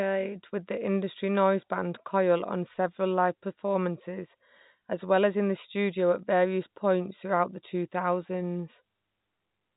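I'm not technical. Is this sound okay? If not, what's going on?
Yes, this speech has no technical faults, and what you hear is ordinary telephone-line coding that keeps only the lower part of the sound, as a landline call does.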